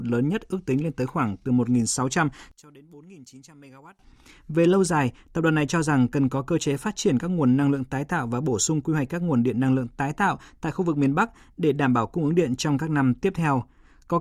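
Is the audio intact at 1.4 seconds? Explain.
Yes, at 1.4 seconds the speech plays through intact, with no dropout, click, distortion or other fault at that moment.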